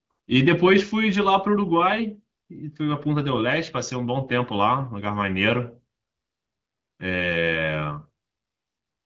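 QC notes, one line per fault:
No faults heard.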